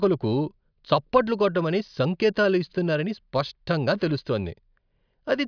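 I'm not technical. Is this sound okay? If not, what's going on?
Yes, nothing stood out as wrong when listening to this speech recording.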